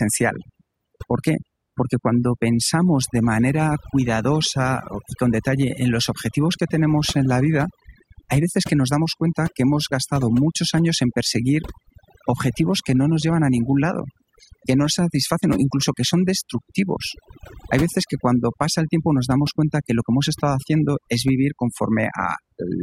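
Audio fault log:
Throughout, overdone noise removal: the noise reduction was pushed way too hard, so any frequency band sitting near its noise estimate gets clamped down or cut out entirely. That takes the quieter bits of the speech along with the noise. Between phrases the background drops, with little twinkling specks where stray bands flicker on and off.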